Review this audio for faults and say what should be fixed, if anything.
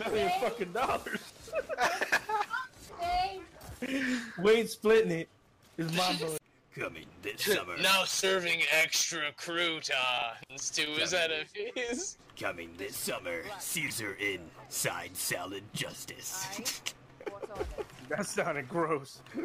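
Chunks out of order occur three times, at 3.82–3.88 s, 10.18–10.22 s and 13.82–13.90 s. In each, a 20 ms block plays after blocks that should follow it (two, one and three blocks late), leaving a brief jumbled stutter. The waveform shows three abrupt discontinuities per event. To prevent it, reorder blocks by sequence number in a jitter buffer before playback or writing.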